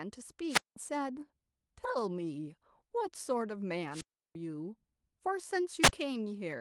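Three wireless microphone squelch dropouts break up the speech. The first runs from 0.48 to 0.76 s, the second from 3.90 to 4.35 s, and the last from 5.82 to 5.93 s. Each time, the analogue FM radio link fades. Hiss rises. The receiver's squelch then shuts the output, leaving near silence of about 190 ms, 340 ms and 54 ms. The speech returns afterwards, passing through a call path whose top end stops near 12 kHz.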